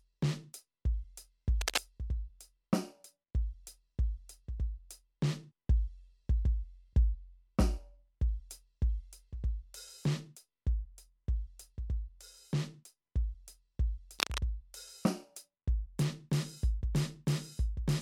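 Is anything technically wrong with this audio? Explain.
Yes, there are two kinds of fault in this music.

From 1.61 to 1.85 s, and again from 14.19 to 14.38 s, a dense, ragged scratching and rustling sits over the music, only a little quieter than the music itself. This is cable scratch noise, likely from a worn cable, connector or control being moved. As the contact shifts, its resistance flickers rapidly, and the signal picks up irregular bursts of noise for those fractions of a second.

Between 5.47 and 5.52 s a brief disturbance cuts into the music. This is damaged data in a compressed stream. Bytes in that part of the encoded file were corrupted, so the decoder misread the affected frames, lost its place and had to search for the next valid frame header.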